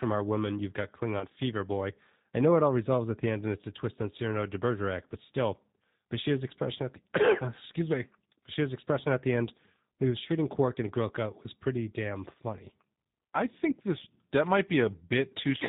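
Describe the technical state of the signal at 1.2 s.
A single packet of about 20 ms went missing in the VoIP stream, and the speech decoder covered the gap by extrapolating from its last pitch period and vocal tract filter while lowering the gain. From 1.19 to 1.24 s, between "our women you've got" and "fever boy I know", this VoIP packet loss concealed by the speech codec stretches the preceding sound into a brief buzzy tone or coloured noise that fades. The recovery stays weak or distorted for tens of milliseconds or more after real packets resume, because each frame's prediction builds on the one before.

Underneath, the whole signal passes through the G.729 codec, here the G.729A variant at 8 kbit/s. The codec reconstructs each 10 ms frame from a filter model, a pitch predictor and a few sparse pulses. Nothing above 4 kHz survives, and the speech around 1.2 s has a plainly audible rough, slightly synthetic texture, consistent with everything else passing through the same low-rate coding.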